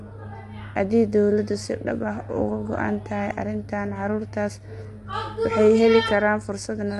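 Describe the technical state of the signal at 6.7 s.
At 6.7 s the speech is still carrying the damage that runs through the whole clip, most likely low-delay AAC compression of the AAC-ELD kind used for calls. Its very short frames can't separate the voice's harmonics cleanly, and at a rate that sounds close to 32 kbps the coder runs short of bits. The voice comes out rough and grainy, with noise filling the gaps between harmonics, and nothing remains above 11.6 kHz.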